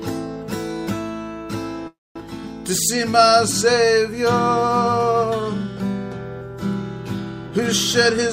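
This audio has two network-related faults. From 1.87 to 2.17 s there is a call audio freeze, likely caused by packets held up in transit so the jitter buffer ran dry. The receiver stretched the last sound into a buzz or hiss that decays and then goes silent for about 220 ms. When packets resume, playback continues where it stopped, so nothing is lost, but a 281 ms gap is inserted and the delay grows by that much. Later, from 7.47 to 7.59 s, a jitter buffer speed-up occurs. The buffer was holding more audio than its target, so the receiver trimmed it by cutting out short pitch-period pieces in quick succession, roughly 50 ms in total. That stretch plays at about 147% speed at unchanged pitch and sounds clearly hurried.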